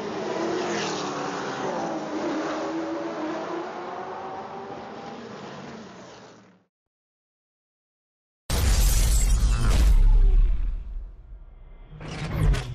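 Nothing in this one trips the ear at all: no glitches, dropouts or odd artefacts turn up anywhere along the way, so there's simply nothing to flag.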